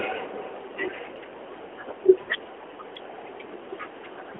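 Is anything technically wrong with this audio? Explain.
Yes. Lost AMR speech frames at 2.22 to 2.30 s: the decoder concealed the 60 ms gap, which fits three lost 20 ms frames, by repeating the last good pitch and vocal tract settings with falling gain, so the speech stretches and fades briefly within the narrowband 300 Hz to 3.4 kHz line.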